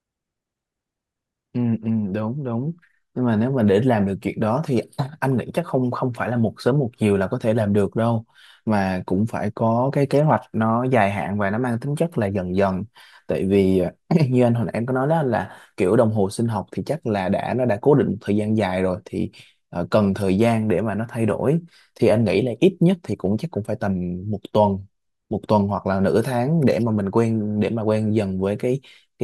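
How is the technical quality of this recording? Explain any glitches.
No technical glitches can be heard anywhere in this speech recording. Nothing in the audio points to a problem in capture, processing or playback, so there is nothing to explain.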